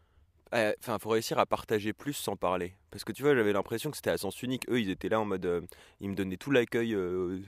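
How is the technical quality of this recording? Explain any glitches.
Nothing in the recording stood out as a technical problem on listening, so there are no glitches to explain.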